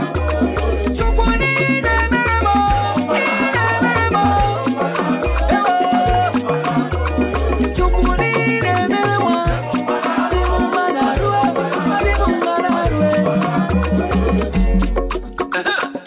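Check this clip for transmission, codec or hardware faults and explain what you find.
No transmission, codec or hardware faults.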